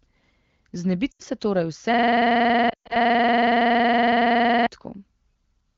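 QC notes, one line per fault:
1.12–1.22 s, lost AMR speech frames: radio errors corrupted about 80 ms of frames, so the decoder reused the last good settings with falling gain, dropping to near silence before recovering.
1.94–4.67 s, system hang loop: the system froze while playback kept cycling one 46 ms piece, which fits a 2048-sample buffer, producing a rigid stutter at about 21.5 Hz.
2.69–2.97 s, lost AMR speech frames: about 160 ms of corrupted frames scattered over 200 ms, with the longest run at 120 ms, drop the sound to near silence, returning rough.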